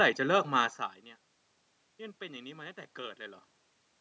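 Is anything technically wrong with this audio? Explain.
No, nothing technically wrong can be heard here.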